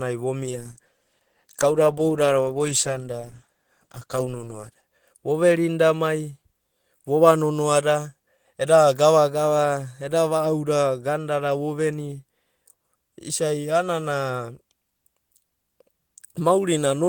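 Speech with a call bitrate drop from 0.44 to 4.89 s: steadily muffled, watery coding, which fits a fall from 32 to 13 kbps, with no packet-loss gaps.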